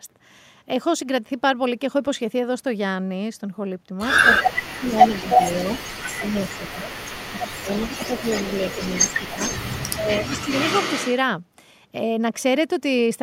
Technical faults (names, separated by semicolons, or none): echo leak; speech suppressed in double talk